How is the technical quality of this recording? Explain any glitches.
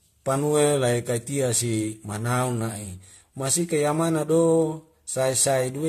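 The recording has one fault, present throughout. The speech sounds swirly, smeared and hollow, with blurred attacks and no content above 14 kHz. This is likely generation loss: repeated lossy re-encoding, about five passes, consistent with AAC-LC at 64 kbit/s. Each pass adds fresh quantisation noise and spectral holes.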